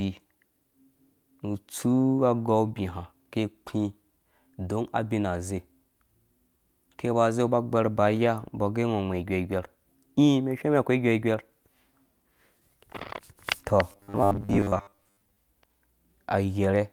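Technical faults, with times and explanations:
13.92 to 15.38 s, robotic sound from repeated short buffers: new audio likely stopped reaching the playback stage in time, so the software covered each gap by replaying the last short chunk, and roughly half of what is heard in this span is repetition while the real audio in between is skipped. The buzz sits at 100 Hz, which fits a chunk about 10 ms long, and it turns the speech into a rigid, metallic drone that only loosely tracks the words.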